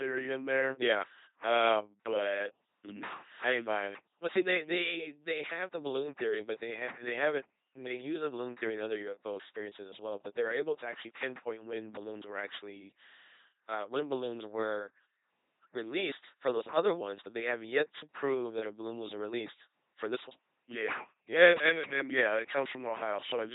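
From the start to the end, the speech runs through an LPC-10 vocoder. It sounds buzzy and robotic. Each moment is either a buzzing pulse source or hiss, with nothing in between. Where that choice goes wrong, voiced sounds turn to hiss or breathy sounds buzz. The damage is heavy, which fits a 2.4 kbit/s LPC-10 coder. Nothing is heard above 3.8 kHz, so the top end sounds dull and boxed in.

From 21.40 to 21.68 s there is hard clipping. The level is pushed about 5 dB past what the stage can pass, so the peaks are cut flat. Those flat tops add harmonics high in the spectrum. For just over a quarter of a second, the loud parts break into a harsh, crackling fuzz on top of the vocoder buzz.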